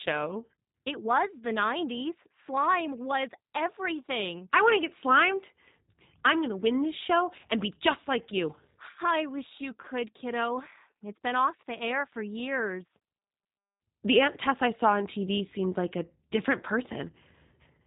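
Speech passed through a G.729 codec for its whole length, and the sound fits G.729's 8 kbit/s mode. Rather than storing the waveform, the codec sends a vocal tract filter, a pitch predictor and a handful of pulses in each 10 ms frame, and the decoder rebuilds the speech from those. Everything above 4 kHz is gone, so the voice sounds narrow and boxy, with a plainly audible rough, synthetic, buzzy edge.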